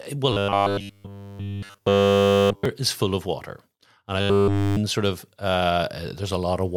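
Audio data was likely arriving too seldom, so the playback path kept looping one short stretch of roughly 10 ms to fill the gaps, skipping the real speech underneath. That is robotic sound from repeated short buffers: nearly every moment is a repeat, imposing a fixed 100 Hz metallic buzz that only loosely tracks the talker. It runs from 0.32 to 2.65 s, ending just before "is full of water", and again from 4.21 to 4.77 s, just before "sort of".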